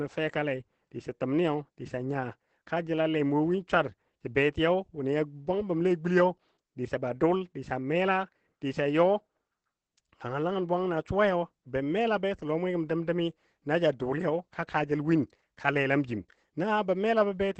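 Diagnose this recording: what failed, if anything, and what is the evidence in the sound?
The speech sounds muffled, hoarse and slightly robotic from start to finish, and nothing is heard above about 8.5 kHz. This is Opus voice compression at the codec stage. The SILK linear-prediction coder, running in wideband mode with 20 ms frames, has cut the band at 8 kHz and coded the excitation coarsely, which thins and roughens the voice. The plainly audible damage fits a low bitrate of around 12 kbps.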